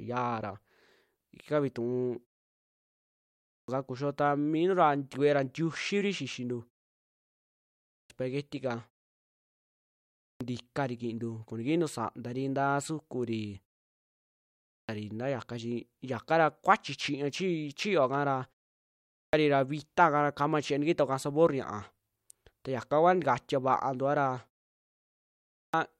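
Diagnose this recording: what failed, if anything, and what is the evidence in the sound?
Playback stage fault: clipped start after a pause. Speech restarts abruptly out of silence at 3.07, 7.47, 9.77, 14.27, 18.76 and 25.13 s. Each time, roughly 0.57 to 0.64 s of onset is lost, as before "ntikari kintuu koo nikintu". The output device sleeps in silence and wakes too slowly.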